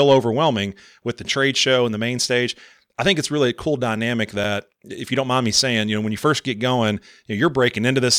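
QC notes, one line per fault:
4.44 s, block of digital silence: a brief tick or dip in the speech between "really a cool dynamic" and "if you don't mind". A 5 ms run of zeros replaced the audio, cutting out and back with no fade, either because the output buffer went unfilled in time or because a calculation produced invalid values.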